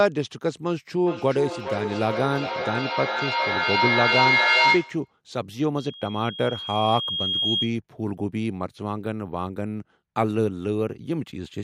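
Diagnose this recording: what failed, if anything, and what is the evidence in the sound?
Call processing failed first. From 1.0 to 5.15 s there is feedback echo between two devices. Each phrase returns roughly every 0.4 s, thinner and more ringing. The repeats pile up to about 4 dB above the speech. One device re-sends what another plays, and no canceller catches it.

The playback path then forms a loop. A loudspeaker feedback squeal runs from 5.77 to 7.76 s. It is a single 3.3 kHz tone. It swells over about a second and a half until it roughly matches the speech level. At that frequency the loop gain exceeded one.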